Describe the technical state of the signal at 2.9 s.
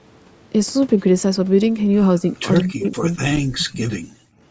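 At 2.9 s the speech sits inside a dip from 2.63 to 3.85 s. It sounds like speech suppressed in double talk, likely an echo canceller, cutting the level deeply.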